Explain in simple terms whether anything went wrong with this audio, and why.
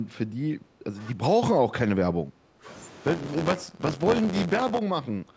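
Echo leak, from 0.65 to 0.78 s and again from 5.26 s to the end. A very faint, delayed copy of the speech trails the speech by about 0.27 seconds. This is likely an echo leak. The other end was probably playing the call through a loudspeaker, and its microphone picked that sound up. Its echo canceller didn't remove all of it, so a weak leftover was sent back down the line.

Speech suppressed in double talk, from 0.91 to 1.22 s, 1.52 to 2.67 s, 3.53 to 4.05 s and 4.46 to 4.51 s. In each of these stretches the speech dips noticeably in loudness. The dip is deepest between 3.53 and 4.05 s. The likely cause is that both sides spoke at once. The echo canceller couldn't tell the real talker from loudspeaker echo, so it turned everything down together.

Buffer tearing, from 3.05 to 4.79 s. A steady robotic buzz at about 86 Hz rides on the sound and is present only while there is signal. The program filling the audio buffer and the hardware reading it have drifted out of step, so they cross in every cycle. 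Roughly a tenth of each chunk replays audio from about 20 ms earlier, with hard joins on either side. The buzz rate fits a 512-sample buffer.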